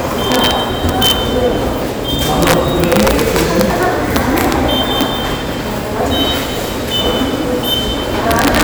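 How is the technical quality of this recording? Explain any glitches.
Poor: the audio has integer overflow at 0.32–0.51 s, 0.89–1.11 s, 2.42–4.52 s, 5.01 s and 8.31–8.62 s. Peaks driven about 1–4 dB past the limit wrap to the opposite sign, producing violent cracks. On the waveform these show as large vertical jumps, and on the spectrogram as broadband vertical streaks.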